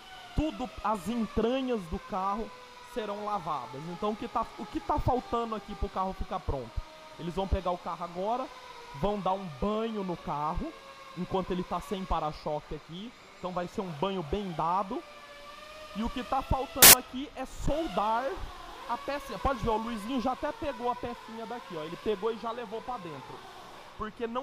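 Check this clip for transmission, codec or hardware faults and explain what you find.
One fault appears. From 16.82 to 16.93 s, samples built from the wrong bytes: misassembled bytes turn low bits into loud, harsh broadband noise, unlike clipping, which distorts the original sound rather than replacing it.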